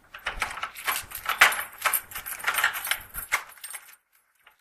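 No technical faults can be heard anywhere in this recording of sounds.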